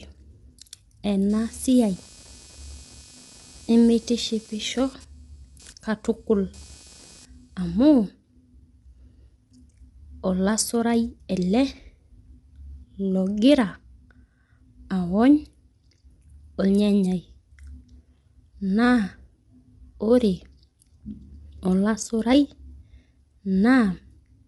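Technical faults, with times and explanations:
Throughout: low-delay AAC compression, likely AAC-ELD as used in video calls, at a rate that fits about 32 kbps. The speech sounds rough and grainy with noise filling the gaps between harmonics, because the low bitrate leaves too few bits to code them cleanly, and nothing comes through above 11.6 kHz.
1.3 to 7.9 s: computer activity noise, a buzzy chirping pulse around 300 Hz sitting roughly 30 dB under the speech. It comes from processor or graphics load shifting the shared ground of the audio circuit, so it follows the machine's activity, not the talking.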